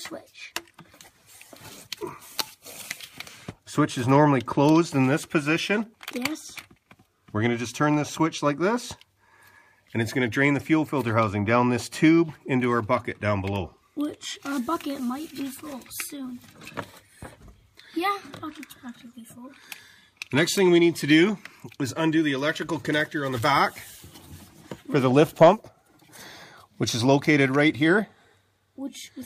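No technical faults can be heard anywhere in this recording. There is nothing in the audio that calls for a timestamp or a repair note.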